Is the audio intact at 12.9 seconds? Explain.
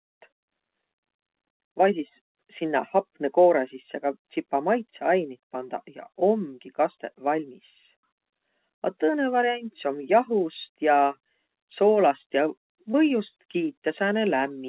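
No. A short concealed packet loss sits at 12.92 to 12.95 s. About 20 ms of the call audio never reached the decoder in time. The receiver covered the hole by carrying the preceding sound forward for about 14 ms, from its pitch if voiced or as shaped noise if not, then blended back into the real signal. It comes through as a brief smear or wobble, and a short consonant there can drop out entirely. The whole passage is band-limited to 4 kHz by the G.711 call codec.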